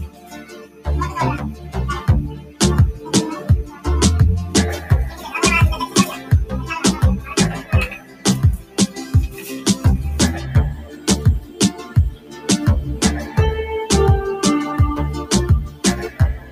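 Across the whole clip the level keeps surging and sagging, with held sound thinning out and fading tails swallowed while sharper onsets push through. The swing reaches around 15 dB. This is a noise suppressor applied to music or sounds. A processor tuned for speech is treating sustained, steady content as background noise and pulling it down, which leaves the sound pumping and hollow.

The deepest of these dips are heard as sound cut by the noise suppressor, in four stretches. From 0.07 to 3.86 s, sustained parts sink by up to about 13 dB, across roughly a second and a half of the span. From 5.12 to 9.51 s, the drop reaches about 12 dB over a similar total. From 10.77 to 13.37 s, about a second is pulled down by up to about 12 dB. From 15.68 s to the end at 16.51 s, a brief stretch of under half a second dips by about 12 dB. In each, the suppressor's gain clamps down on steady or decaying material it has mistaken for noise.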